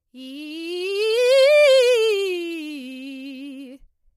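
A short music clip with plainly audible low-delay AAC compression throughout: the tone sounds rough and grainy, and the top band is dulled and synthetic-sounding. Very short codec frames smear harmonics into noise between partials, visible on a spectrogram as blurred harmonic lines and patchy upper bands, likely AAC-ELD at a bitrate around 32 kbps.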